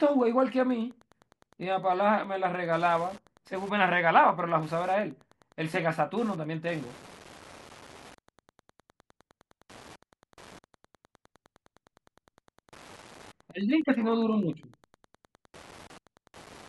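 A faint, steady ticking about ten times a second runs under the speech from start to finish, roughly 30 dB below it. This is Wi-Fi interference: a nearby radio's beacon, repeating every 102.4 ms, is picked up and rectified by the audio circuit.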